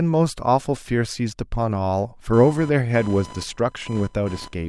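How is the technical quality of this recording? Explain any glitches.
The recording has one clear fault. Computer activity noise enters at 2.33 s and continues to the end. Processor load disturbs the shared ground, adding a fast buzz roughly 20 dB below the speech.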